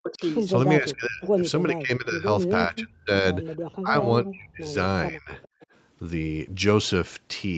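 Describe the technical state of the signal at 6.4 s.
At 6.4 s the speech is intact with no fault, carried through the call processing and Opus call path with content reaching up to about 8 kHz.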